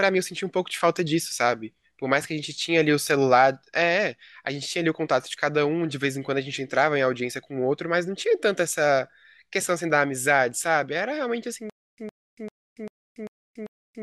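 Stutter with silent gaps from 11.70 s to the end: a 110 ms fragment of speech repeats six times, each followed by about 283 ms of dead digital silence, roughly every 394 ms. The likely cause is a stalled stream replaying its last buffer on each retry, so the following speech never arrives.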